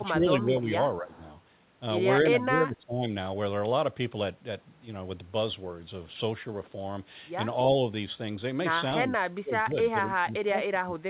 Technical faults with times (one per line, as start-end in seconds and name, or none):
0.00-0.75 speech suppressed in double talk
1.00-1.22 speech suppressed in double talk
1.14-1.18 echo leak
2.23-3.06 speech suppressed in double talk
9.03-9.12 speech suppressed in double talk
9.41-11.00 speech suppressed in double talk